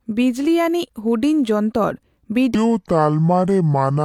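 A section at the wrong speed runs from 2.55 s to the end of this speech clip at 4.05 s. From that point the speech plays at about 0.68 times its recorded rate, so it drags noticeably and the voice drops by roughly seven semitones, with pitch and tempo falling together at one abrupt step. The likely cause is that this stretch was played back or resampled against the wrong clock, slowing it instead of preserving its original timing.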